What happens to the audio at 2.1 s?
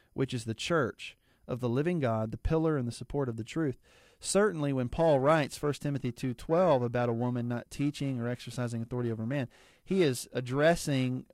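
Nothing goes wrong at 2.1 s; the speech carries on intact through that moment, with no dropout, click or distortion.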